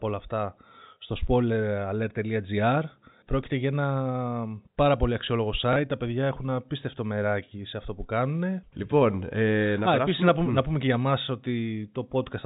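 At 5.73 to 5.76 s, packet loss with last packet repeated: about 30 ms went missing, consistent with one lost packet, and the previous stretch was replayed, giving a small blip. The waveform shows a copied block, all within the telephone band that ends at 4 kHz.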